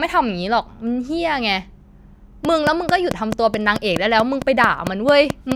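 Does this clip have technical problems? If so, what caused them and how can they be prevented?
Yes. From 2.45 s to 5.53 s a train of clicks ticks over the speech, about 15 near-identical pulses at a steady 4.6 per second, peaking roughly 15 dB above the speech and continuing through the pauses. The even spacing and repeated shape set it apart from random crackle or a one-off edit click, and the likely cause is electrical interference or a faulty connection or power supply. Keeping cables away from other equipment and using a stable, properly powered interface prevents it.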